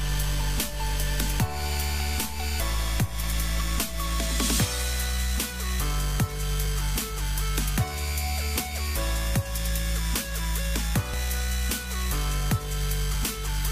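At 6.66 s and 8.6 s the sound skips ahead by about 20 ms, and at 11.14 s it jumps again, losing around 40 ms. This is likely a dropped buffer (overrun), where unread audio was overwritten and the surrounding pieces joined with no gap.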